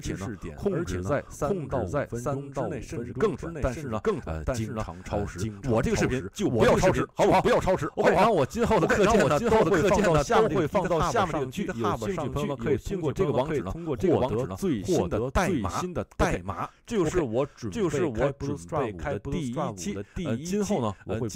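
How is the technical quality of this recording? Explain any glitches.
The recording is marred by a doubled audio track throughout: every sound returns about a second later at roughly equal loudness, clean and dry, likely from a second, slower capture path being mixed in.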